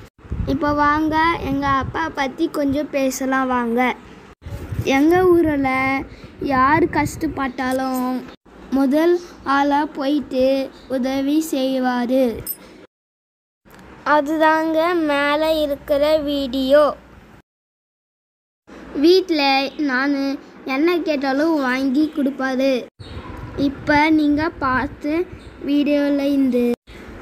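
No technical faults are audible.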